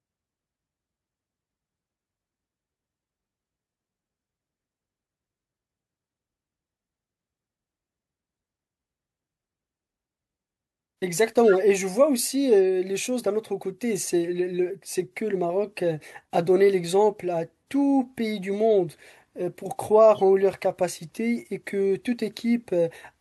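Corrupt frame decoded at 11.49–11.55 s, 13.96 s and 20.15–20.21 s: damaged compressed frames were played anyway, misplacing energy in frequency and producing brief chirps, squeaks, blips or noise bursts, the first loudest.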